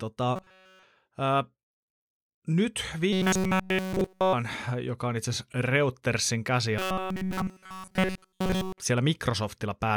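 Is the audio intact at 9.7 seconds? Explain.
Yes, the speech at 9.7 seconds plays through intact, with no dropout, click, distortion or other fault at that moment.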